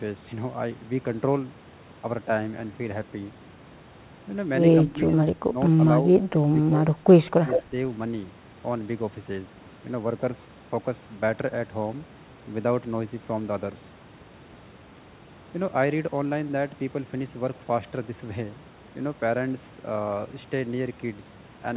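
Between 4.9 and 7.73 s the speech dips six times: 4.9–5.11, 5.5–5.57, 6.31–6.47, 6.68–6.72, 6.9–7.04 and 7.29–7.73 s, sinking by roughly 5 to 20 dB, deepest at 6.31 s. This pattern is likely speech suppressed in double talk, with the echo canceller attenuating the near talker while the far side also speaks.

From 7.5 to 7.63 s, inside the last dip, a delayed copy of the speech appears 158 ms behind the original and only a few dB below it, band-limited to 4 kHz like the G.711 call path. This is likely an echo leak, where loudspeaker pickup escaped cancellation and returned.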